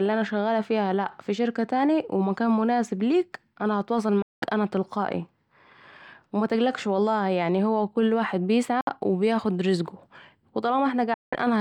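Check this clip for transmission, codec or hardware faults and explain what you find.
Three short silences break the speech, at 4.22 to 4.47 s (after "ليك أنا الي هتواصل"), 8.81 to 8.89 s (after "هو مل واحد"), and 11.14 to 11.35 s (after "و بياخد رزقه و"). Each cuts out and resumes mid-flow, with the skipped audio simply missing. The likely cause is Bluetooth dropout: packets arrived too late for the headphones and were discarded.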